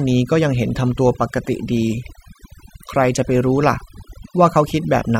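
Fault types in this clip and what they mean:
overdone noise removal: A noise reduction stage set far too aggressively cuts individual frequency bands whenever they sit near its noise estimate, taking the quieter parts of the speech along with the noise. Throughout the clip the background drops and breaks up into twinkling specks.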